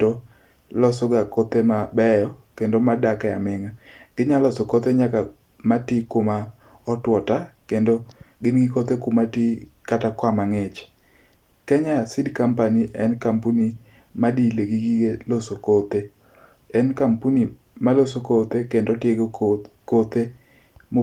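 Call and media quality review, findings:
Nothing to flag here, the speech comes across fine and the Opus voice compression at 24 kbps in hybrid mode sounds just as you'd expect at that rate.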